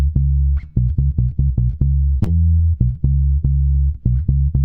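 Two brief glitches from short concealed packet loss occur at 2.23–2.30 s and 3.73–3.77 s. At each, about 20 ms of audio never arrived, and the receiver filled the gap (26 ms, then 20 ms) by extending the preceding sound. The first event also dropped 12 ms. Each is heard as a short smear or wobble. On a spectrogram the patch shows smoothed, repeated harmonics or shaped noise without fresh onsets, and the waveform shows a copied cycle pattern fading back into real signal.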